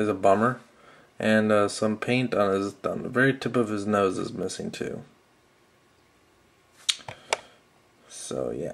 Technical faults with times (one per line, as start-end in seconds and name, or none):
4.14-4.58 CD scratch ticks